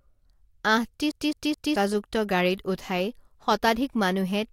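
From 1.11 to 1.76 s the speech stutters evenly, one 214 ms fragment repeating three times with short mutes, a CD stuck on one turn as the laser jumps back each revolution.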